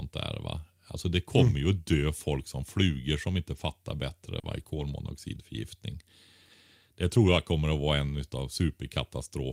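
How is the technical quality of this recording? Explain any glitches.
The speech has a handful of packet-loss glitches, mostly bunched around 4.4 to 4.8 s.

Lost packets rebuilt from error correction: at 3.55–3.61 s (after "som flugor som inte"), 4.43–4.61 s, 4.67–4.81 s and 7.27–7.41 s (before "kommer att vara en"). There's no gap, but the decoder swapped in the low-bitrate backup copies, so those spots sound rougher and noisier.

Short concealed packet loss: at 4.39–4.45 s and 4.63–4.67 s, about 40 ms and 20 ms never arrived. The decoder stretched the preceding sound over each hole, leaving a quick smear or wobble.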